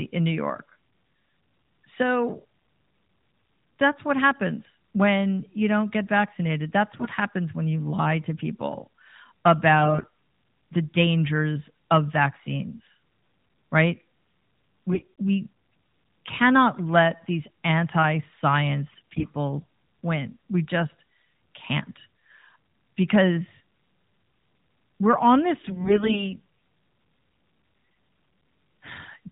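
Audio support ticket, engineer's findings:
AMR bit errors at 6.92–7.09, 9.80–10.08, 14.92–15.08, 18.92–19.27 and 25.64–26.27 s: brief hoarse, gargly bursts as flipped codec bits misplace excitation pulses. Spectrogram shows smeared, noisy harmonics below the narrowband 4 kHz ceiling.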